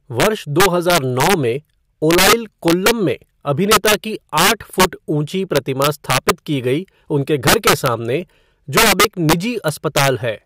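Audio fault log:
Throughout, integer overflow: the speech is driven about 8 dB past full scale, and a couple of percent of samples wrap to the opposite sign instead of limiting, giving violent cracks on loud syllables. The waveform shows peaks flipping full-range, and the spectrogram shows broadband vertical streaks.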